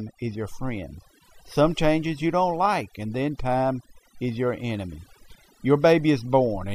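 Throughout the speech, overdone noise removal leaves the background almost silent but speckled with twinkling artefacts. The suppression was too aggressive, switching off bands near the noise floor along with quiet speech detail. A spectrogram shows scattered isolated dots and ragged, gappy harmonics.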